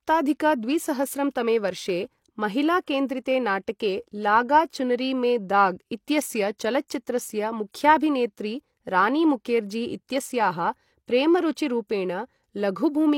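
Speech, with pre-echo at 11.55 s: a short hiss smears about 16 ms ahead of an attack, visible as a broadband noise haze before the transient.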